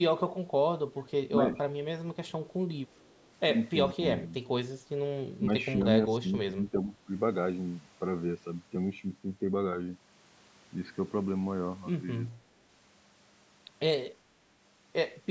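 From 0.93 to 1.11 s and 2.87 to 3.32 s, a very faint echo leak repeats the speech 406 ms late. It is likely loudspeaker pickup that the echo canceller missed, and unlike room reverberation it is a separate delayed copy. Speech suppressed in double talk follows at 3.94 to 4.04, 4.2 to 4.35, 5.39 to 5.66, 6.21 to 6.28 and 6.46 to 7.07 s, as drops of around 10 to 15 dB. These likely come from the canceller turning down both talkers, so the voice dips rather than being echoed.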